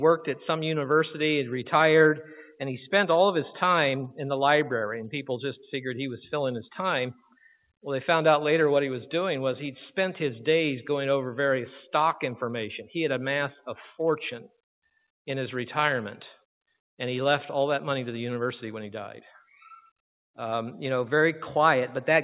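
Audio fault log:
No faults found in audio.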